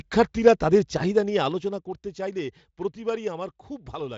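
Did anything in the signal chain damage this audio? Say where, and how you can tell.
Yes. A gain stage stepped the level rather than ramping it, causing zipper noise: from 1.02 to 1.95 s, fine ticking rides a drop of around 10 dB, made in 1 dB jumps about ten times a second.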